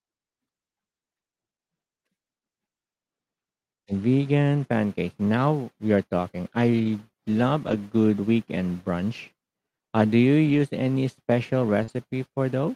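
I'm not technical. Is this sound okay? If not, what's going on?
No. Lost packet rebuilt from error correction happens four times: at 6.79 to 6.89 s, just after "we are talking"; at 7.67 to 7.73 s, just before "good weekend brunch"; at 10.45 to 10.59 s; and at 11.88 s. Bits of the call went missing in transit, but the next piece carried a rougher backup copy, so there's no gap, just briefly rough, noisy-sounding moments.

Short concealed packet loss occurs at 11.83 to 11.90 s, right after "any special". About 40 ms never arrived, so the receiver filled the hole by stretching out the last sound and blending back in, which you'd hear as a quick smear or wobble.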